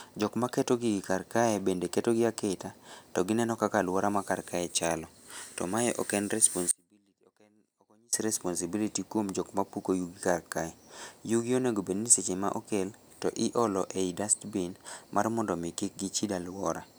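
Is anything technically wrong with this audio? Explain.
Yes. From 6.71 s to 8.13 s there is an audio dropout to a faint residue: the speech cuts out abruptly for about 1.4 s, leaving only a faint leak of sound roughly 30 dB below normal before snapping back. The likely cause is a brief loss of the wanted signal upstream while the path after the break stayed live. On a waveform the envelope collapses to a thin band with vertical edges; a spectrogram shows a sudden, near-empty vertical stripe rather than a tapering fade.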